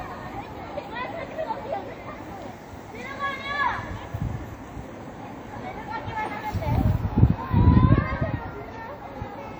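From start to finish, the sound carries plainly audible coding damage, likely from WMA compression. It rings and smears. Transients blur into a washy haze that lasts tens of milliseconds. A thin hiss rises and falls with the signal. Quieter detail drops out in patches, because weak spectral lines get zeroed. That points to an early WMA encoder at a low bitrate, around 48 kbps. Content still reaches about 20.1 kHz, so the damage is smearing rather than a lost top end.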